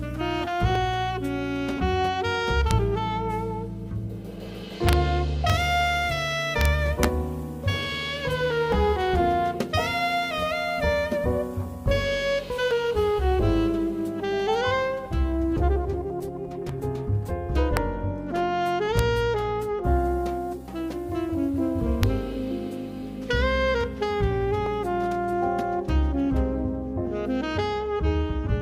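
Right at 0.75 s there's a tiny skip, the first of the overlap between stream segments skips. Two segments' timestamps overlapped, so the player trimmed a few milliseconds of sound that was never actually doubled, and the waveform jumps across the gap. The same small skip comes back at 8.72, 12.71, 16.69, 20.68 and 24.67 s, all falling on the 4-second segment boundaries, which is why they sound so evenly spaced.

Meanwhile the loud moments crack hard. That's integer overflow: the sum went past the largest integer and wrapped to the opposite sign instead of being clamped, so each peak flips across the full range. You get it at 2.71 s, over 4.89 to 4.93 s, at 5.50 s, over 6.61 to 6.65 s, at 7.04 s, then at 17.77, 18.99 and 22.03 s. The peaks are only about 0 to 2 dB over the limit, but the cracks are still far harsher than ordinary clipping.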